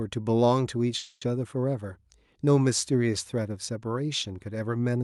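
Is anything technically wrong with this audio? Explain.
Yes. A call audio freeze occurs from 0.97 to 1.23 s, likely because delayed packets emptied the jitter buffer. The receiver stretched the last sound into about 240 ms of fading buzz or hiss, ending in a brief silence, then resumed where it stopped. Nothing is lost, but everything afterwards plays 240 ms late.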